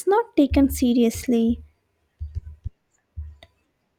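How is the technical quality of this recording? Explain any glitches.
No glitches turn up anywhere in this recording, and there's nothing to explain.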